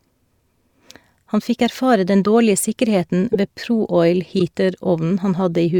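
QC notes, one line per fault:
3.33–3.36 s and 4.39–4.41 s, corrupt frame decoded: two short bursts, each about 26 ms, peaking at about -5 dBFS. The decoder played damaged frames whose misread gains and codes placed energy at wrong frequencies, heard as a chirp, squeak, blip or burst of noise. The durations point to one or two frames each.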